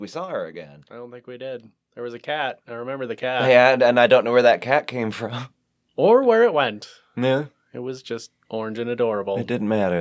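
A speech recording with one audible fault: automatic gain rising, running from 0.5 s, just after "we saw her", to 3.82 s, ending before "and I don't know". Over those three-odd seconds the level climbs steadily by about 12 dB, and the room noise swells along with the voice. This happens because the automatic gain control judged the input too quiet and pushed its gain up gradually. The band-limiting from the call microphone processing, with nothing above 8 kHz, is expected.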